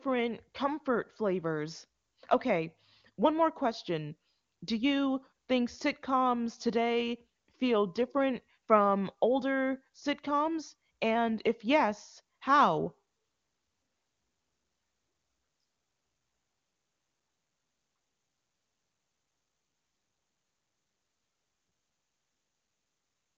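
Nothing stood out on listening to this speech recording, which carries the narrow top end of wideband AMR telephone audio with nothing above about 7.2 kHz.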